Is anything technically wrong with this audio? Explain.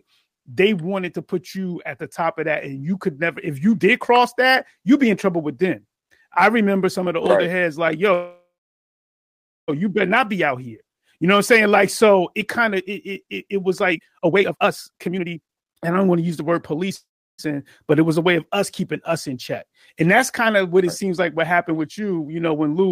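Yes. This speech has two call audio freezes and one stretch of jitter buffer speed-up.

Call audio freezes at 8.13 to 9.70 s and 16.95 to 17.40 s: the audio stops, the last sound carries on as a brief fading buzz or hiss, then goes silent for about 1.2 s and 0.35 s. Speech resumes exactly where it halted, with nothing lost but about 1.5 s and 0.43 s of extra delay. The likely cause is delayed packets draining the jitter buffer. On a waveform each looks like a short decaying tail followed by a flat gap. A spectrogram shows smeared horizontal bands fading to blank.

Jitter buffer speed-up from 13.86 to 16.91 s: speech runs at 150% speed with its pitch unchanged and sounds hurried. The receiver is trimming an excess backlog by cutting out many tiny pitch-period slices, removing roughly one and a half seconds in total. A spectrogram shows syllables and pauses compressed closer together with harmonic spacing preserved.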